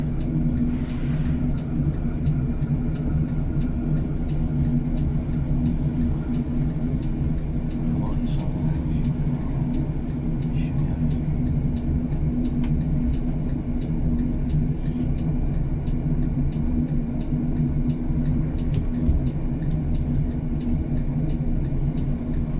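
Nothing stood out on listening to the audio.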